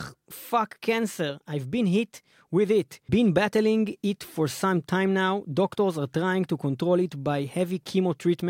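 No technical faults can be heard in this speech recording. Nothing in the audio points to a problem in how it was captured, carried or reproduced.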